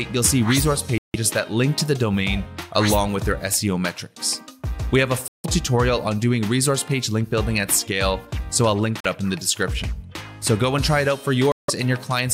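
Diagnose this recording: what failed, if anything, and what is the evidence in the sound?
The sound drops to dead silence four times: 0.98 to 1.16 s, 5.28 to 5.46 s, 9.00 to 9.06 s, and 11.52 to 11.70 s. Three gaps are about 160 ms of silence and one is only about 40 ms. Each time the audio picks up again. That pattern is likely a Bluetooth stall on the wireless playback link: interference delays packets, the headphone buffer empties, and output pauses until retransmissions arrive.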